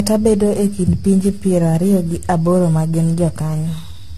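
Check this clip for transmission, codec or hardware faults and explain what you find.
One fault runs through the whole clip: generation loss. The speech sounds swirly, hollow and smeared, attacks blur, and nothing sits above 14 kHz. A single AAC-LC pass near 64 kbit/s wouldn't do this much damage. It was likely re-encoded around ten times, with noise piling up each pass.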